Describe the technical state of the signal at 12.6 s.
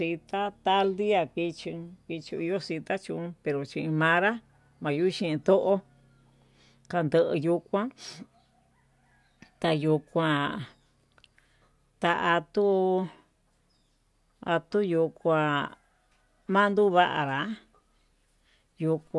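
The speech signal at 12.6 s is intact, with no technical fault present at that moment.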